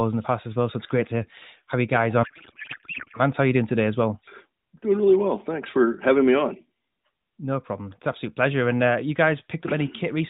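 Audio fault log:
2.24–3.21 s, codec payload misread: the AMR frames were packed octet-aligned but decoded as bandwidth-efficient, so every field landed in the wrong bits and the speech gives way to garbled, warbling noise that barely tracks it, in a narrowband sound with nothing above 4 kHz.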